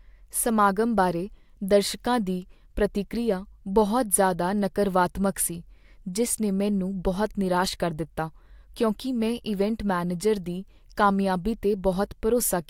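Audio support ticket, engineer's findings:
No faults found on the speech recording; no defects audible at any point, so nothing to attribute to any component in the chain.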